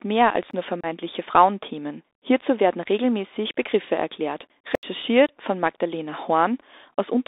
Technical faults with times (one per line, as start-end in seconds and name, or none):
0.00-7.28 Bluetooth CVSD headset codec
0.51-0.53 block of digital silence
0.81-0.86 unconcealed Bluetooth headset packet loss
4.75-4.83 block of digital silence
5.26-5.29 unconcealed Bluetooth headset packet loss